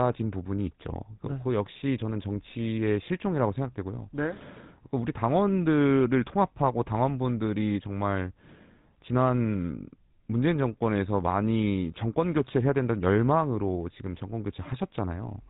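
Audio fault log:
throughout – GSM full-rate codec. The speech has a plainly audible buzzy, gravelly roughness for the whole clip. Nothing comes through above 3.8 kHz, so the sound is dull and narrow. This codec models the vocal tract as a filter. It drives that filter with a sparse train of regular pulses, keeping only one excitation sample in three. That coarse pulse source causes the grit. The sound fits the 13 kbps GSM full-rate stream.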